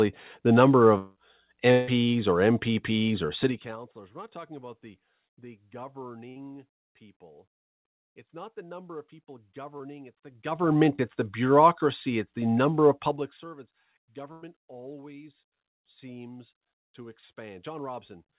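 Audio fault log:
0.98–1.18 s and 1.72–1.89 s, long network dropout: for about 0.18 s and then 0.16 s the sound turns into a fading held buzz or hiss with no silent gap, and it resumes further on with those stretches missing. This is likely a network stall long enough to use up the receiver's concealment. It is longer than the packet-loss bursts later in the clip.
3.39–3.79 s and 13.04–13.48 s, zipper noise: the level falls by roughly 25 dB and then roughly 20 dB in 2 dB jumps at about 30 per second, with no smoothing between them. Each jump clicks, so a fast ticking rides on the sound. A smooth fade would have no ticks.
6.29–6.38 s and 14.32–14.44 s, burst of packet loss: 60 ms and then 100 ms of audio never arrived in time. The receiver stretched the last sound into a dimming buzz or hiss and then jumped ahead. The gap is shorter than the dropouts and longer than a mere smear.
9.78–9.82 s and 10.96–11.00 s, short concealed packet loss: about 20 ms went missing each time. 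The decoder patched each hole by extending the preceding sound and blending back, which leaves a brief smear or wobble where a short consonant can vanish.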